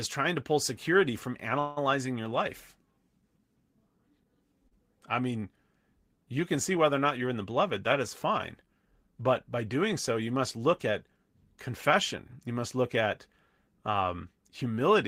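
At 1.59 to 1.79 s, just after "to pull security from", the speech halts in a call audio freeze. The last sound is drawn out as a fading buzz for about 172 ms before "your life" resumes. The likely cause is packets held up in transit and an emptied jitter buffer, which inserts a gap while losing nothing.

At 4.67 s a short stall from a late packet holds the sound for about 35 ms before "I mean". One packet missed its slot, so the receiver stretched the preceding sound until it arrived, giving a brief smeared buzz with nothing missing.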